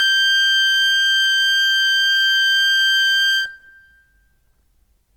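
From the start of the music right through to the end, tones come across noisy, rough and grainy rather than clean. That's plainly audible Opus compression, likely in its CELT music mode at a rate around 24 kbps. The encoder holds on to each band's energy but runs short of bits, so it patches the detail with folded copies of lower bands or with noise. The top end still reaches about 20.1 kHz, so it's gritty rather than muffled.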